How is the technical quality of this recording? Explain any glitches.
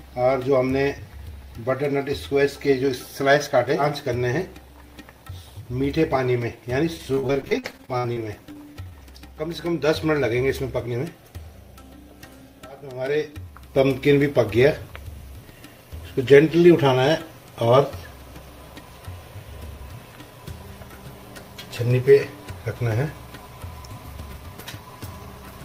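The recording has one glitch. From 6.97 to 8.93 s there's repeated packet loss (robotic sound): dropouts keep getting patched by stretching the last bit of audio, so it turns choppy with pieces missing.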